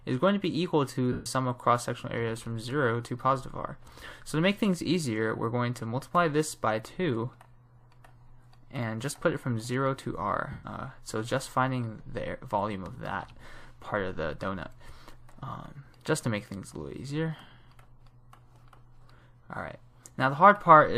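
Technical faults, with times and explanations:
1.12–1.26 s and 10.51–10.64 s: lost LE Audio frames. About 135 ms and 120 ms of Bluetooth audio went missing, and the LC3 decoder refilled each gap with the last spectrum under randomised signs, smearing the sound into brief noise.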